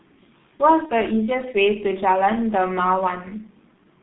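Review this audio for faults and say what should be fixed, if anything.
The speech sounds muffled and hoarse throughout, with blurred consonants. This is heavy G.723.1 codec damage: at 6.3 kbit/s and slow 30 ms frame updates, the audio is confined to roughly 200 Hz to 3.6 kHz. To prevent it, use a wideband, higher-bitrate codec such as Opus or G.722.

From 0.86 to 0.92 s a brief smeared stretch fades and the voice stays weak or distorted afterward. This is VoIP packet loss concealed by the speech codec, which fits a single lost 30 ms frame extrapolated from the previous pitch and filter. To prevent it, add jitter buffering and forward error correction, and reduce network loss.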